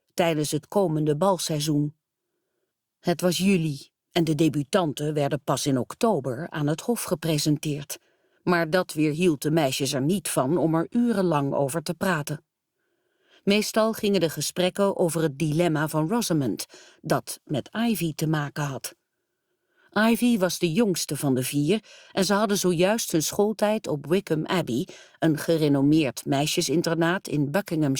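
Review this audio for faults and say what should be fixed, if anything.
Nothing stood out on listening, so there is nothing here that needs fixing.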